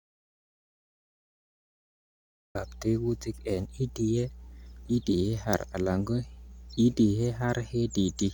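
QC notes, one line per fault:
throughout: mains hum. A steady 60 Hz tone sits about 20 dB below the speech. A ground loop or nearby transformer couples the power line into the signal.
0.00–2.55 s: audio dropout to silence. The clip opens in complete silence, with no room tone, and the speech comes back mid-flow at 2.55 s. The input was likely lost while silence was still being written.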